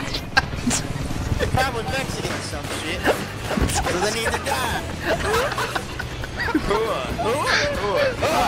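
No technical faults can be heard anywhere in the clip.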